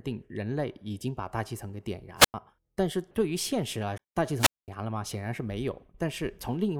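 A speech recording with two kinds of fault. Wireless microphone squelch dropouts occur at 2.17 to 2.34 s and again at 4.36 to 4.69 s. In each, the radio link from the microphone fades, hiss climbs, and the receiver's squelch shuts the output, leaving a hole of near silence (about 96 ms in the first, 215 ms in the second) before the voice comes back. That rising hiss before the gap sets it apart from a simple digital mute. At 3.98 s there is a CD skip: a knock or a flaw made the laser jump to another turn of the disc's spiral, so playback mutes very briefly (about 15 ms) and resumes from a different point in the recording. Unlike the dropouts, it brings no hiss at all, just a brief gap and an abrupt discontinuity in the speech.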